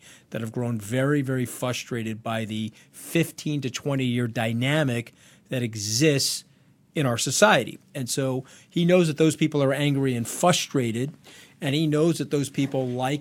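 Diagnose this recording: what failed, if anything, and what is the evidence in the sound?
Nothing failed here: I listened for trouble at every stage of the chain and the speech just carries on as recorded, with nothing in the sound pointing to a problem anywhere.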